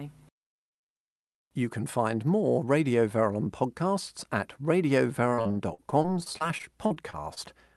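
From 5.29 to 7.38 s the speech turns choppy and robotic, with holes up to 49 ms long. This is repeated packet loss, with each gap patched by repeating earlier sound.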